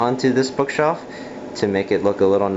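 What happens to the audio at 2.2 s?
Nothing goes wrong at 2.2 s; the audio there plays through intact, with no dropout, click, distortion or other fault.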